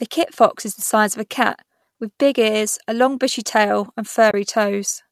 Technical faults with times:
4.30-4.34 AAC frame loss with muting

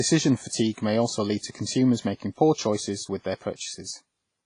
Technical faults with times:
0.00-4.46 WMA compression

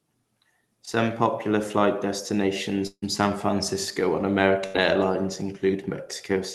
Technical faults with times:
0.85-0.89 short concealed packet loss
2.87-3.04 long network dropout
4.66-4.76 burst of packet loss

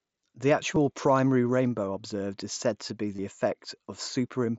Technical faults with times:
0.75 concealed Bluetooth headset packet loss
1.86 concealed Bluetooth headset packet loss
3.16-3.19 concealed Bluetooth headset packet loss

